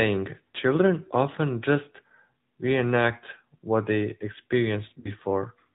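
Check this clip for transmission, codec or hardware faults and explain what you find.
Two faults show up: narrowband mobile coding throughout, and a short dropout near the end.

AMR narrowband mobile codec, whole clip: the speech passed through AMR-NB, which samples at 8 kHz and rebuilds the voice from a vocal-tract model driven by sparse pulses, at a rate that fits a mid mode around 10 kbps. Everything above 4 kHz is gone, and the voice has a plainly audible buzzy, synthetic edge.

Lost AMR speech frames, 5.00 to 5.13 s: radio errors corrupted about 40 ms of frames, consistent with two 20 ms frames. The decoder filled the gap by repeating the last good pitch and vocal-tract settings at falling gain, which produces a brief dip or warble. The voice comes back weak or rough for a moment afterward.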